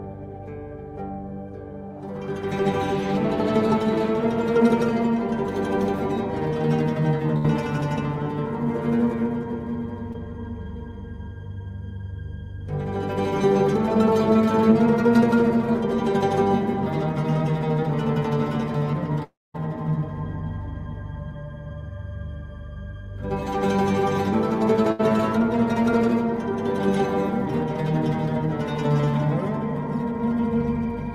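At 7.37 to 7.46 s a burst of packet loss removes about 60 ms of audio. The receiver extends the preceding sound for roughly 70 ms, fading it into a brief held buzz or hiss, and playback resumes past the missing segment. The same fault recurs at 24.92 to 25.01 s.

At 10.12 to 10.16 s a short concealed packet loss drops about 20 ms before decoding. The receiver synthesises a continuation of the last sound and blends it back into the real signal, which is audible as a momentary smear or wobble.

From 19.24 to 19.56 s about 300 ms of audio is lost, likely from a long network dropout. The last sound continues briefly as a fading buzz or hiss, then about 220 ms of silence follows before the audio resumes, with that stretch absent.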